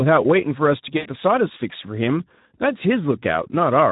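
From the start, the speech carries Speex codec damage, plainly audible: at what sounds like a low bitrate, around 11 kbps, the excitation is coarsely coded, so the voice comes out hoarse and noisy, with any upper band reduced to shaped noise.

From 0.98 to 1.09 s, VoIP packet loss concealed by the speech codec takes over for about 80 ms. The decoder extends its last pitch and filter with falling gain, stretching the sound as it fades, and the voice stays weak or distorted briefly afterwards.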